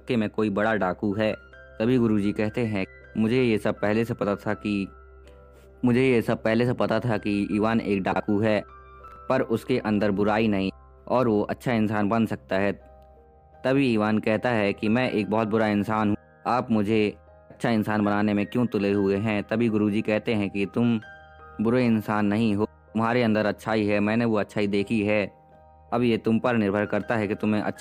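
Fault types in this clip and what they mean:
Chunks out of order: two brief stretches, at 8.12 to 8.20 s and 9.08 to 9.16 s, where a 40 ms block of audio plays one position later than it should, so the block that belongs after it is heard first. No audio goes missing; the sequence is simply swapped. Each swap leaves three abrupt joins, so every event sounds like a short jumbled flicker. The two events fall roughly a second apart.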